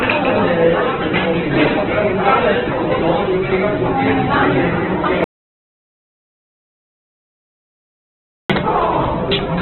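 From the start, the audio is narrowband with nothing above 4.3 kHz, and its tonal parts sound rough, grainy and noisy rather than clean. This is heavy Opus compression in its music (CELT) mode, which fits a very low bitrate near 8 kbps. CELT keeps each band's energy and fills starved bands with folded or noise content. Unlike MP3 damage, it leaves few spectral holes, so there is grit instead of swirling, watery artefacts.

At 5.24 s the sound cuts off abruptly, and from there to 8.50 s, about 3.25 s, there is silence. This is an audio dropout to silence, most likely caused by the input being lost while the recorder kept writing silence. A fade, a noise gate or a quiet passage would leave some room tone or decay. This gap has no background at all, and the audio resumes mid-flow at 8.50 s with the missing stretch gone.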